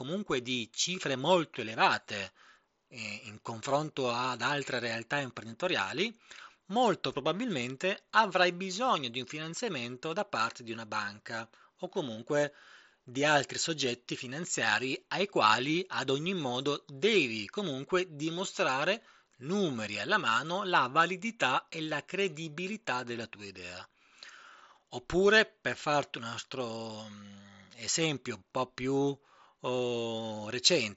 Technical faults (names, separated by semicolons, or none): none